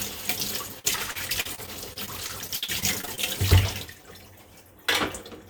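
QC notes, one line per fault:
0.79–3.19 s, repeated packet loss (robotic sound): about 17 short dropouts, the longest around 56 ms, each patched by extending the preceding audio. Roughly 440 ms, about 18% of this stretch, is filler, giving choppy, robotic sound with fragments missing.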